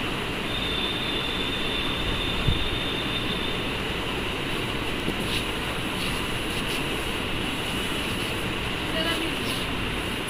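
Chunks out of order at 3.8, 5.0, 6.5 and 8.1 s: each time one 100 ms chunk lands a chunk late, giving a brief jumbled stutter.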